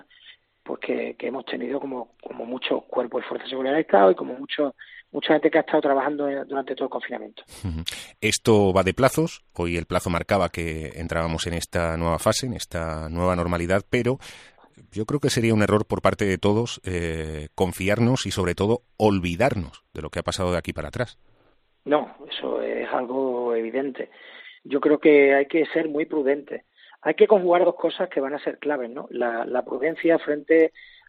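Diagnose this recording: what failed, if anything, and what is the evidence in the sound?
Nothing in the signal chain failed: the audio holds a steady, continuous signal with no break, distortion or level disturbance at any point that would implicate a stage from the wiring through to playback.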